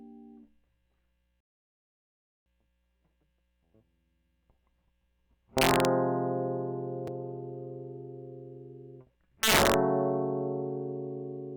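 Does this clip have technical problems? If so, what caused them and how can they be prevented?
Yes, there are two kinds of fault in this music. First, a rebuffering stall: at 1.40 s the music drops to dead silence and picks up again at 2.46 s right where it left off, so nothing is missing but about 1.06 s of extra time gets inserted. That's the player draining its downloaded audio and waiting for more data before it can carry on. A bigger playback buffer, or adaptive bitrate switching down before the buffer empties, would prevent it.

Second, integer overflow, heard as harsh, violent cracks on the loud passages at 5.58 to 5.85 s and again at 9.43 to 9.74 s. The gain or mix sum pushed the signal past the largest integer value, by about 4 dB the first time and about 8 dB the second, and instead of being held at the limit, those peaks wrapped around to the opposite sign, jumping across the full range. 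That's why it sounds far nastier than ordinary clipping. Doing the math in a wider type or floating point, and saturating instead of wrapping when converting back, would prevent it.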